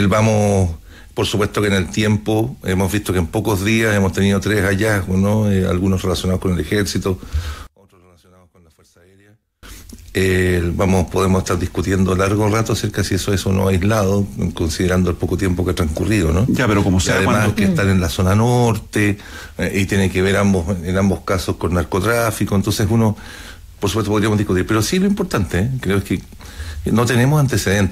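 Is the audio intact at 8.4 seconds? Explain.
No. At 8.4 seconds the sound sits inside a stretch from 7.67 to 9.63 s where it collapses. The level drops by about 34 dB. What remains is faint, with the centre almost gone. The likely cause is one channel inverted. One stereo side has flipped polarity. When the two sides are summed to mono, everything they share cancels. Only the small difference between them survives.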